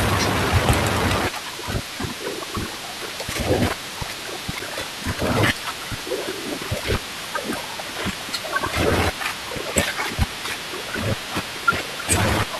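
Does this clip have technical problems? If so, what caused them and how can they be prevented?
Yes. A CD skip occurs at 4.59 s. The laser lost its track and landed on a different turn of the disc's spiral. Playback mutes for a few milliseconds, giving a small tick. The speech then resumes from another point. To prevent it, clean the disc, replace it if scratched, and keep the player free of knocks.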